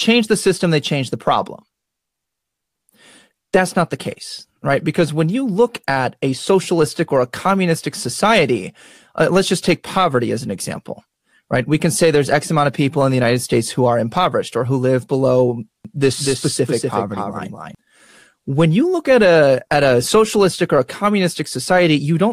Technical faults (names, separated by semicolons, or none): doubled audio track